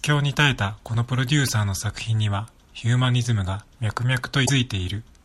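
Damaged data in a compressed stream throws the decoder out of sync twice, leaving it to hunt for the next valid frame: a brief glitch at 1.47 to 1.49 s between "ロデュー" and "サーの作", then a longer one at 4.43 to 4.50 s right after "脈 々".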